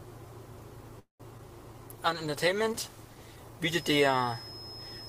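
A call audio freeze at 0.99 to 1.22 s stops the sound, which trails off and then sits silent for about 120 ms, likely because packets stalled in transit and the jitter buffer ran dry. When delivery resumed, playback picked up where it had halted, so a 202 ms gap was inserted and nothing was lost. Short concealed packet loss follows at 1.38 to 1.41 s: about 20 ms never reached the decoder in time, and the receiver covered roughly 11 ms of it by extending the preceding sound, leaving a brief smear or wobble. A call bitrate drop runs from 1.98 to 3.44 s, when the encoder was pushed from 48 kbps down to 15 kbps and held at the bottom for about 1.39 s. This makes the coding coarser and duller, with a rough, watery, muffled quality until the rate climbs back. A feedback whistle at 5.2 kHz sits behind the sound from 3.6 s to the end at 5.08 s, around 15 dB under it, a thin tone that slowly swells and fades, likely from the loudspeaker-to-microphone loop hovering at the edge of feedback.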